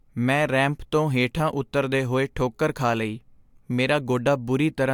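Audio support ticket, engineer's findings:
No audible faults found in this speech recording.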